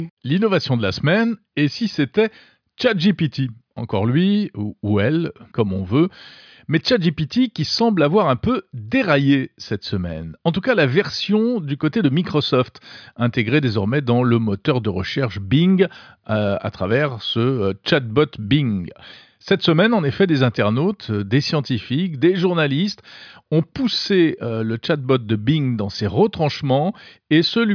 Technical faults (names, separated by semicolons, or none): none